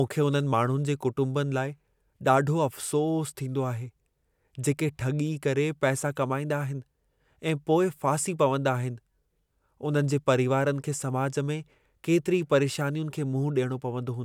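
Nothing stood out as a technical problem on listening to this speech recording.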